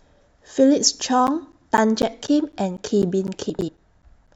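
From 1.27 s to 4.28 s, periodic USB or driver dropouts: every 0.25 s about 10 ms of speech is replaced by silence, heard as roughly fifteen evenly spaced ticks. At 1.57–1.66 s and 3.50–3.69 s, frames out of order: adjacent blocks of about 46 ms and 93 ms play swapped, giving a garbled flutter.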